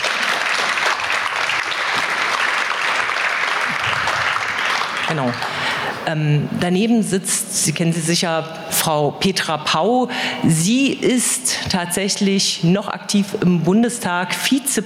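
Gain pumping runs throughout: the gain swings roughly 15 dB, likely from excessive gain driving a fast limiter.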